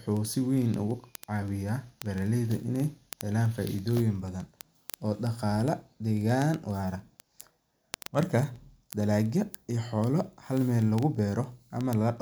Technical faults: word clock ticks

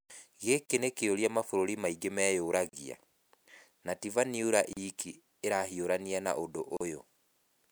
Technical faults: gap at a join of encoded pieces

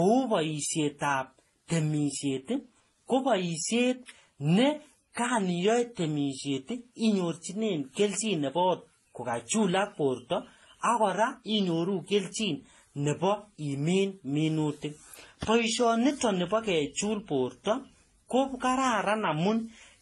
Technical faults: transcoding between lossy codecs

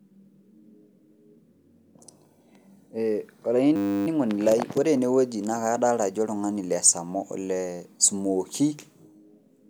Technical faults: system hang loop

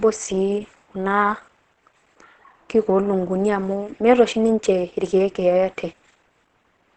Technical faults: Opus compression

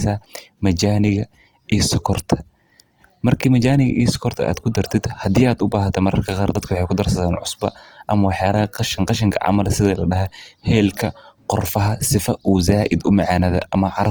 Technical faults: Opus compression

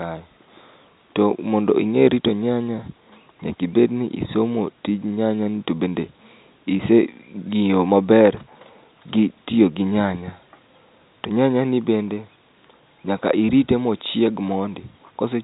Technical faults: none

